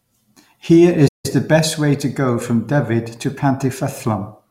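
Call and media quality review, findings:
Playback stall, 1.08 to 1.26 s. Speech cuts out mid-flow; output silent about 0.16 s, then resumes. Probable component: player output path, likely buffer underrun or blocked audio thread starving the device of samples. Silence rather than glitch or repeat, consistent with the renderer waiting for data before recovering.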